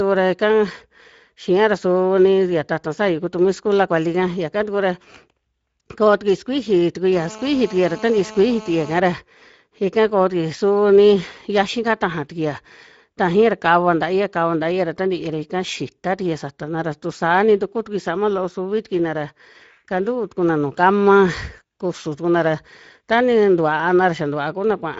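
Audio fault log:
throughout: Speex codec. The speech passed through a Speex CELP encoder at a setting that fits about 16.8 kbps. That is too few bits for the excitation, so the voice comes out plainly hoarse and noisy. The upper band reaches only to about 7.7 kHz and is filled with shaped noise, not real detail.
7.12–9.00 s: GSM phone buzz. It starts just after "tukui sukuiji". A nearby 2G phone on a call sent out radio bursts about 217 times a second. The audio circuitry rectified them into a steady, hard, raspy 217 Hz buzz with many harmonics. The buzz sits about 18 dB below the speech and has no connection to it.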